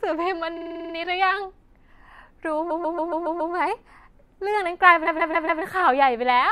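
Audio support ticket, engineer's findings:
Repeated frames, 0.56–0.93 s, 2.70–3.53 s, 5.06–5.62 s. Stutter. A 46.4 ms block plays 8 extra times, then a 139.3 ms block 6 and 4 extra times, consistent with 2- and 6-frame runs. Probable component is the muxer or transport resending compressed frames, which the decoder replays. Adds about 1.8 s in total.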